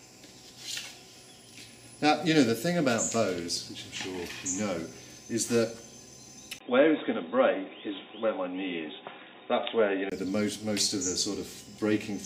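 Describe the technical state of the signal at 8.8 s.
At 8.8 s the audio sits inside a narrowband stretch from 6.59 to 10.12 s. Nothing passes above 3.8 kHz, so it sounds dull and boxy. A 20 ms gap marks the change, and a faint new noise floor appears. Level stays about the same. The likely cause is an input switched to a poorer device.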